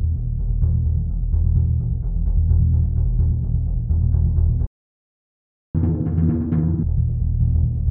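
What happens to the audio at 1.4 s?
Nothing goes wrong at 1.4 s; the music plays through that moment intact, with no dropout, click or other fault.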